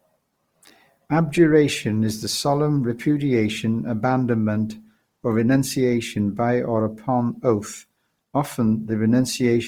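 From start to end the speech sounds grainy and rough, without MP3-style swirl or narrowed bandwidth, likely from Opus compression at around 24 kbps.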